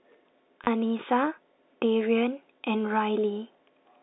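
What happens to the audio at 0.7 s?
A brief robotic stutter from 0.64 to 0.67 s. This is packet loss with the last packet repeated: about 30 ms of audio went missing, which fits three 10 ms packets, and the receiver replayed the last good packet until new audio arrived.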